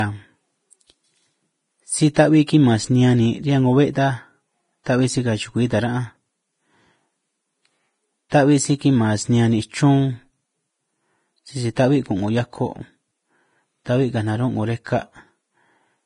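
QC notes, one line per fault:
throughout: Vorbis compression. The speech carries a grainy, hissy texture, with nothing above 10.5 kHz, and the treble turns to coarse noise rather than clean detail. The damage is heavy, which fits a low bitrate of around 28 kbps, and the likely cause is a Vorbis encode. Unlike broadband background hiss, the graininess tracks the signal, swelling on bright sounds and vanishing in gaps, while fine detail near the cut-off is replaced by noise of similar energy.
8.30 to 8.32: pre-echo. A brief smear of hiss, about 22 ms long, runs just ahead of a sharp onset, and the attack itself sounds softened. The transform codec spread quantisation noise across the block containing the transient, so noise meant for the loud part leaked into the quiet moment before it. Unlike a click or dropout, nothing is missing. The noise arrives before the attack, not after, which distinguishes it from reverb or ringing.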